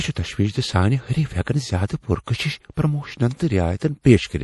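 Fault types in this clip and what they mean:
MP3 compression: the whole recording has plainly audible codec damage, likely from MP3 encoding at a low bitrate around 48 kbps. Nothing survives above 11.5 kHz, and weak frequency content drops in and out between frames, giving the speech a watery, swirling texture with smeared onsets.
Pre-echo: at 1.86 s before "پر کشش پروموشن", at 2.24 s before "کشش پروموشن", and at 4.01 s, a short hiss of about 35 to 37 ms runs ahead of a sharp attack. The codec spread the noise meant for the loud onset across its whole block, so it leaked into the quiet moment before.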